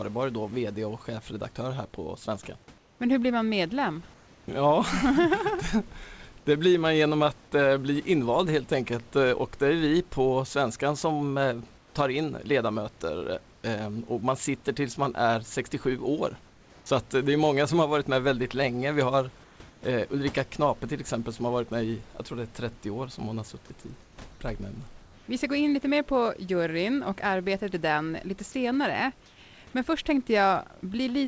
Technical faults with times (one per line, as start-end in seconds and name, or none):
2.78-3.00 comfort noise in place of the background
4.14-4.48 comfort noise in place of the background
11.78-11.94 comfort noise in place of the background
16.50-16.86 comfort noise in place of the background
19.44-19.82 comfort noise in place of the background
24.02-24.18 comfort noise in place of the background
25.02-25.28 comfort noise in place of the background
29.26-29.38 comfort noise in place of the background